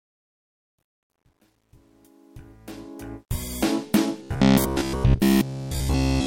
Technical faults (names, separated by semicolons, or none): truncation distortion on a fade; robotic sound from repeated short buffers